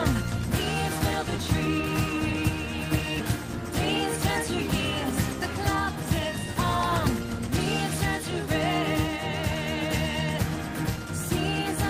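At 3.19 s there's a skip ahead. Roughly 0.7 seconds of audio got dropped, and playback jumps straight across with no gap, so the two sides butt together.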